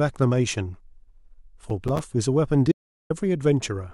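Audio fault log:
1.70–2.04 s, processor overload crackle: the processor falls behind and misses a run of buffer deadlines, around seven of them, each leaving a short hole of silence with hard edges. The tiny gaps, which fit buffers of about 5 ms, follow closely one after another, so the ear hears them as a gritty crackle tearing through the speech rather than as separate clicks. It clears once the load eases after roughly a third of a second.
2.72–3.10 s, audio dropout to silence: the speech stops abruptly and about 380 ms of silence follows, with no room tone underneath, before the sound returns mid-flow. The likely cause is a brief loss of the input signal, such as a disconnected or failed link, while recording carried on writing silence, so whatever was spoken during the gap is lost rather than merely quieted.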